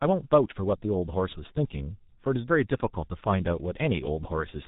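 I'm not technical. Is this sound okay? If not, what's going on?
No. The speech sounds muffled and hoarse throughout, with blurred consonants, typical of the G.723.1 codec, an old phone-call compressor that drops everything above about 3.8 kHz.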